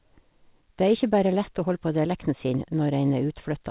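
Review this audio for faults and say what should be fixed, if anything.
Nothing here needs fixing: the speech comes through a call path with nothing above 4 kHz, which fits G.711 A-law at 64 kbps, and that narrow telephone-style band is simply how that kind of call is supposed to sound.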